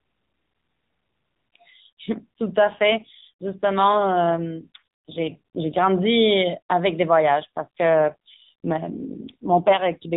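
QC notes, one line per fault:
2.04–5.88 s and 7.36–9.99 s, AMR rate drop: the speech turns rougher, buzzier and more synthetic, then clears. This fits the mobile codec falling from 12.2 to about 5.9 kbps, with fewer bits for the pulse excitation. On a spectrogram the narrowband ceiling stays fixed at 4 kHz and the waveform shows no gap, but the harmonics blur and the formant detail coarsens within each span.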